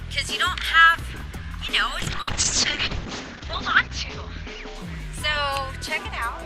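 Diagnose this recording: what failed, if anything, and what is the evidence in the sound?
The failure is a call bitrate drop, at the codec stage, driven by the network. From 2.0 s the encoder's rate falls from 64 kbps to 6 kbps. Audio bandwidth narrows from 20 kHz to 8 kHz, so the top end disappears and the sound is coded more coarsely. The lowest rate holds for about 1.2 s. The bandwidth estimate fell, and the encoder was told to spend far fewer bits. The rate recovers at 6.07 s, and full quality returns.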